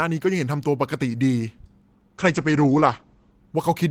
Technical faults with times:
2.22-3.43 call bitrate drop

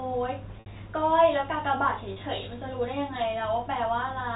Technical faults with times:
0.60-0.66 packet loss with pitch repetition
2.13-2.16 packet loss with pitch repetition

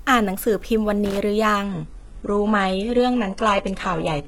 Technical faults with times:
1.05-1.17 loose connector crackle
1.63-4.27 adaptive stream at a lower bitrate

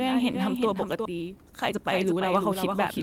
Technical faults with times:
0.00-3.03 doubled audio track
1.05 skip ahead
1.15-3.03 jitter buffer speed-up

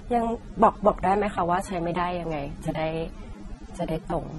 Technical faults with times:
0.00-4.39 transcoding between lossy codecs

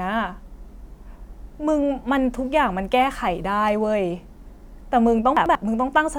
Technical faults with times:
5.37-5.55 frames out of order

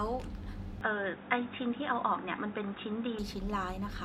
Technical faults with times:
0.81-3.19 input switched to a poorer device

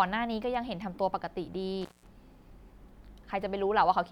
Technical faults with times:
1.81-2.07 intermittent contact

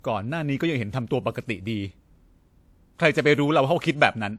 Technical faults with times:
0.00-4.39 transcoding between lossy codecs

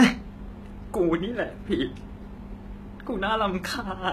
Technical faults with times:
0.00-4.13 low-bitrate audio saved at a high bitrate

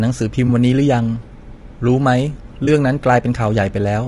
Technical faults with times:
0.00-4.08 low-delay AAC compression
0.47-0.50 AAC frame loss with concealment
2.65-2.68 AAC frame loss with concealment

